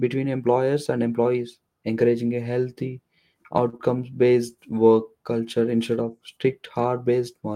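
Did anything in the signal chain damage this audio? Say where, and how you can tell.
Yes. A short stall from a late packet hits the network stage at 3.69 to 3.75 s. The jitter buffer ran dry, so the sound is held about 34 ms, then resumes with nothing lost.

Right after, at 3.77 to 3.81 s, just before "based work culture instead", there's a short concealed packet loss. About 20 ms never arrived, and the decoder bridged it with extrapolated sound, leaving a brief smear.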